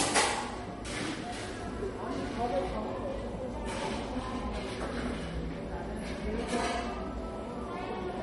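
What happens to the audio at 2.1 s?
At 2.1 s, as through the whole clip, the sound was likely transcoded between lossy codecs, an MP3 pass then Vorbis, stacking each codec's artefacts on the earlier ones, heard together, with nothing above 11.2 kHz.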